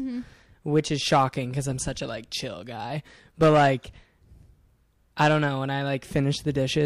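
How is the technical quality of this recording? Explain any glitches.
The recording has one glitch, a brief corrupt-frame error in the speech.

Corrupt frame decoded, at 3.83 s: flipped bits in a single compressed frame were decoded anyway, so misread gains and codes placed energy at wrong frequencies for that frame's duration. It comes through as a quiet chirp, squeak, blip or burst of noise, peaking around -40 dBFS.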